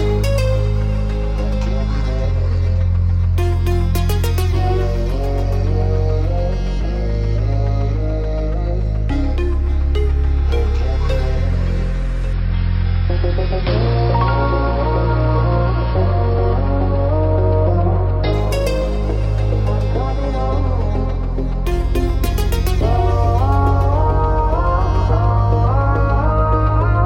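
From 12.33 to 18.33 s the adaptive stream drops to a lower bitrate. Treble vanishes above 5.5 kHz and artefacts rise, consistent with roughly 24 kbit/s. The switch is abrupt but gapless, unlike a dropout. From 21.65 s to the end, mains hum enters: a steady 60 Hz tone, strong and not far below the signal. Its fixed pitch separates it from broadband rumble.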